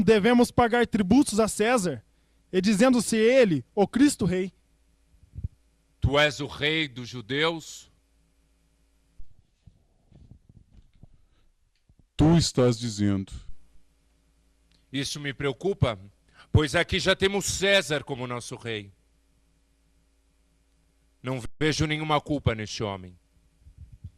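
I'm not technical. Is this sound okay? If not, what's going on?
No. There's a playback stall at about 21.45 seconds. The player most likely ran short of incoming audio, or was briefly held up by other work on the device, so it had nothing to send to the speakers. You hear the sound cut out mid-flow for about 0.15 seconds, a short but clear gap, before it picks up again at 21.61 seconds.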